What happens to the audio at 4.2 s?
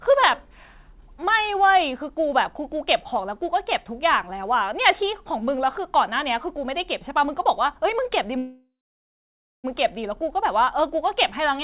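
Nothing goes wrong at 4.2 s: the speech there passes through intact, carrying only the narrowband character of the call path, with nothing above 4 kHz as a G.711-style telephone codec would leave it.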